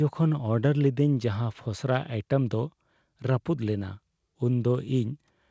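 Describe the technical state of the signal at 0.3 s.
At 0.3 s the speech is intact, carried cleanly through the call path with nothing above 8 kHz, which fits a wideband G.722 link.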